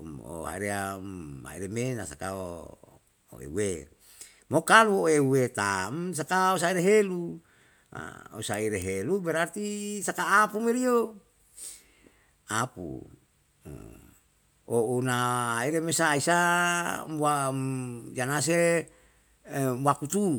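A speech recording with no audible technical faults; the signal holds steady with nothing that points to a problem in how it was captured or transmitted.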